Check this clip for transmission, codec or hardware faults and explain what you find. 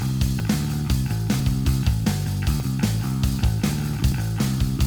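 Four short skips occur, at 0.4, 1.4, 2.6 and 4.12 s. At each the sound jumps ahead, losing about a tenth of a second at the first and roughly 40 ms at the others. The likely cause is a dropped buffer (overrun). Incoming samples were overwritten before the program read them, so the audio on either side is butted together. Unlike an underrun, no silent gap is heard.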